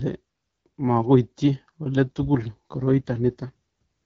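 An AMR rate drop runs from 2.06 s to 3.51 s. The speech comes through an AMR wideband (HD Voice) link whose lighter coding sounds clear, but across this stretch it turns rougher and more synthetic, which fits the network stepping the codec down from 12.65 to 8.85 kbit/s to spend bits on error protection. The bandwidth holds and nothing drops out, and the roughness lifts once the higher rate returns.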